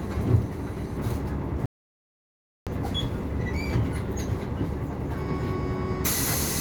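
The input was likely lost from 1.66 to 2.67 s while recording continued: an audio dropout to silence, the sound cutting out abruptly with no room tone.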